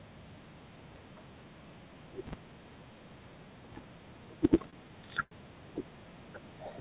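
A filter restarted on every block, forgetting its state at each block boundary from 0.40 s to the end, so each block opens with a small transient; in this speech clip the result is a steady 200 Hz buzz that rises and falls with the loudness of the talking. Two short stalls from late packets also occur: the jitter buffer ran dry and the receiver held the last sound until the data arrived, stretching audio by 25 ms at 4.70 s and by 82 ms from 5.23 to 5.33 s, heard as brief held moments with nothing skipped. The call path's telephone-band limit is also audible, with nothing above 4 kHz, which fits G.711 A-law coding.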